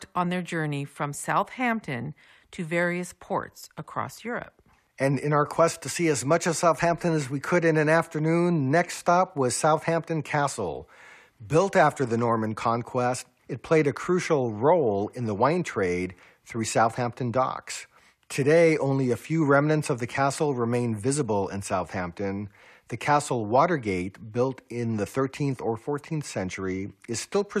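Nothing in the speech stood out as a fault on listening.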